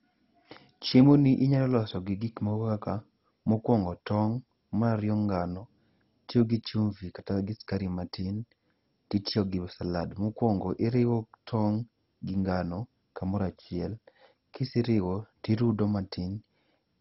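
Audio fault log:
throughout, MP2 compression: the speech sounds dull and gurgly, with nothing above about 5.6 kHz and a gritty, grainy texture. That's likely MP2 at a very starved rate, something like 32 kbps, switching off the upper sub-bands and coarsely quantising the rest.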